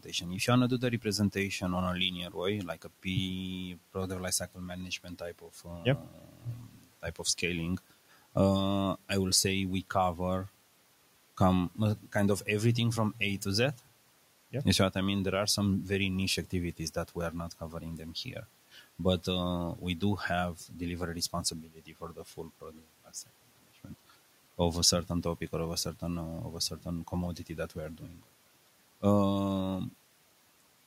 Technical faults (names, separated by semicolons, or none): speech cut by the noise suppressor